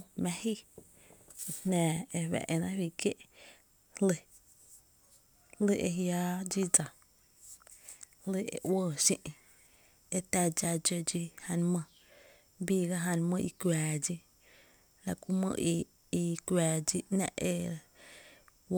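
No technical faults are audible.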